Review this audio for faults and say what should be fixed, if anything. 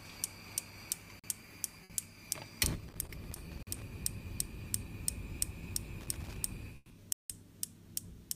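Three kinds of fault need fixing.

Block of digital silence, at 1.20 to 1.24 s, 3.63 to 3.67 s and 7.13 to 7.30 s: the sound drops abruptly to dead silence and snaps back. The first two holes are about 43 ms, the last about 171 ms. Blocks of zeros were written because the output buffer wasn't filled in time; the lengths fit a 2048-sample buffer at 48 kHz, with the longer hole about four buffers in a row. To prevent it, enlarge the output buffer or give the audio thread higher priority so it never underruns.

Burst of packet loss, at 1.84 to 1.92 s and 6.76 to 6.92 s: the sound smears into a held, fading tone or hiss, then jumps ahead with material missing. At 1.84 s about 60 ms was concealed. At 6.76 s about 140 ms was concealed, fading into about 10 ms of silence before playback resumed. The receiver was extending the last audio it had to cover packets that never arrived or came too late. 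To prevent it, use a deeper jitter buffer plus forward error correction or redundant packets on the link.

Loose connector crackle, from 2.88 to 3.82 s and from 6.01 to 6.36 s: irregular scratching rides over the sound. A worn or dirty contact is rapidly making and breaking, chopping the signal, and any DC on the line adds pops. The 43 ms dropout at 3.63 s falls inside the first crackle burst. To prevent it, clean or replace the connector and secure the cable so it cannot move.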